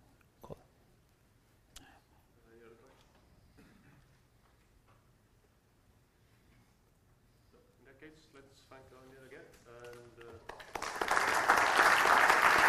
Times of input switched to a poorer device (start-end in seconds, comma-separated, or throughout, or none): none